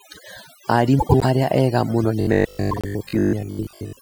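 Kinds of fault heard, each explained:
Overdone noise removal: Throughout the clip, the background drops to near silence dotted with twinkling specks. This is a noise reducer set far too strong. It pulls individual frequency bands down whenever they sit close to its noise estimate, and it takes the quiet parts of the speech along with the hiss. It differs from a plain low-pass or dull recording because the damage flickers band by band over time.
Frames out of order: From about 0.99 to 1.25 s, just before "arĩa ega mũno", two neighbouring blocks of about 104.5 ms each play in swapped order. A second swap from 2.71 to 2.85 s exchanges blocks of about 52.2 ms. Each one sounds like a brief garbled flutter. Unlike a dropout, nothing goes missing and the timing stays intact, because the same audio simply plays back in the wrong sequence.
Robotic sound from repeated short buffers: From 2.21 s, right after "arĩa ega mũno", to the end, the speech turns into a rigid metallic buzz locked at 50 Hz that still loosely tracks the words. 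The likely cause is audio arriving too seldom, so the player loops a fragment of about 20 ms for most of that stretch while real audio is skipped. The fixed buzz pitch tells it apart from ordinary stutter or jitter.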